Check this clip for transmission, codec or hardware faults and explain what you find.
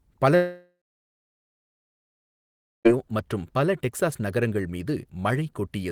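One fault stands out, a long network dropout in the speech from 0.35 s to 2.87 s. At 0.35 s the last sound is stretched into a fading buzz or hiss for about 0.4 s, then roughly 2.1 s of silence follows before speech resumes with about 2.5 s simply gone. The likely cause is a stalled stream whose concealment ran out. Unlike a brief packet-loss glitch, the gap is far too long to patch, and the decaying tail separates it from a clean mute.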